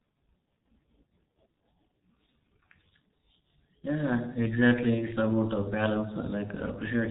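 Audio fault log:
Throughout: G.723.1 codec. The speech sounds muffled and hoarse, with consonants smeared together and nothing above 3.8 kHz. The damage is heavy, as expected from a low-rate telephony coder at about 6.3 kbit/s that works in 30 ms frames and tracks the voice only coarsely.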